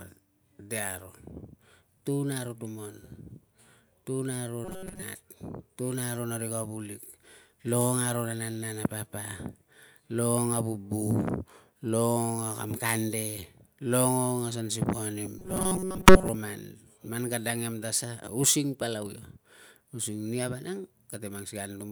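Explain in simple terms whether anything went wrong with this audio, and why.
Audio likely arrived too slowly, so the software kept repeating tiny slices instead: robotic sound from repeated short buffers. From 4.65 to 5.03 s and 15.38 to 16.29 s, the speech becomes a metallic 188 Hz buzz.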